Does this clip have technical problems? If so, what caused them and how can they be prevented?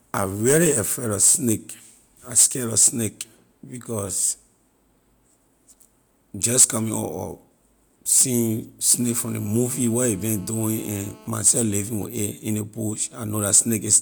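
Yes. From 9.00 to 11.28 s there is GSM phone buzz: a nearby 2G phone in a call pulses its transmitter 217 times a second, and the audio circuit rectifies those pulses into a hard, raspy 217 Hz buzz, about 28 dB below the speech. Unlike mains hum at 50 or 60 Hz, it is harsh and rich in harmonics rather than smooth. Keeping phones switched off or well away from microphones, cables and preamps prevents it.

From 11.35 to 12.07 s come GSM signalling bursts, at roughly 25 dB below the speech, as a nearby phone, in a call with its user silent, sends only short groups of 217 Hz bursts. Instead of a continuous buzz, you hear even ticks with a longer buzz twice a second. The same distance or flight-mode rule prevents it.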